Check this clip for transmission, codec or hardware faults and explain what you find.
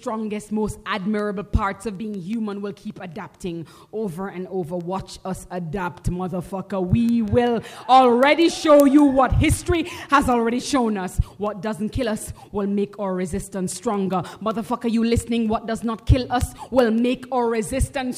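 One hardware fault runs almost the whole clip: word clock ticks from 0.24 s to 18.13 s. The receiving device runs on its own clock rather than locking to the digital source, so the two drift apart by roughly 100 ppm. At each slip a single sample is dropped or repeated, producing about a hundred sharp ticks of uneven strength, roughly five per second. A spectrogram shows evenly spaced thin vertical broadband lines, and a zoomed waveform shows one-sample discontinuities at each slip.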